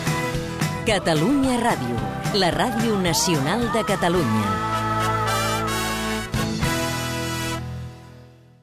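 Nothing stood out on listening; no faults could be heard anywhere in the clip.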